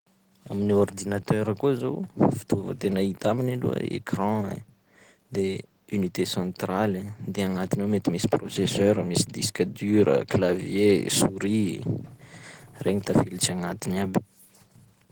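From the start, the speech has a muffled, hoarse quality. The codec damage is plainly audible throughout. The likely cause is Opus compression running in its hybrid mode, which joins a speech coder for the lower band with a transform coder above it. That blend fits a low rate of around 16 kbps. The full bandwidth is kept, but too few bits reach the fine detail.

At 8.88 s, hard clipping appears for about 30 ms, to 8.91 s. Peaks reach the ceiling of a stage and are cut flat. The overload is slight, as the signal only just meets that limit. The flat tops still add high harmonics, heard as a brief crackle. Another hard clipping event occurs at 14.17 s. It is a single peak flattened at the same limit, giving one short click.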